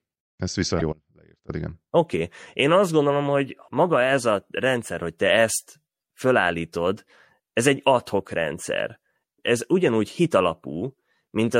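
Throughout the clip the speech carries plainly audible codec damage, likely from MP3 compression at a low bitrate on the order of 64 kbps. With too few bits available, the encoder has discarded weak spectral lines, which drop in and out from frame to frame. The result is a watery, swirling quality, with metallic chirping on sibilants and softened consonant attacks.

From 0.77 to 0.82 s there is a short burst of damaged data in the compressed stream. Here the decoder met frames it could not read correctly, lost sync, and had to find the next valid frame header before carrying on. It is heard as a brief squawk or blip cutting across the speech.

From 0.93 to 1.49 s the signal drops out to a faint residue for about 0.56 s. The wanted audio was likely lost upstream while the rest of the path stayed live, so the gap is not silent. A faint trace of sound remains, some 25 dB below normal level. 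Both the cut and the return are abrupt, with no natural fade, and the sound resumes mid-flow when it comes back.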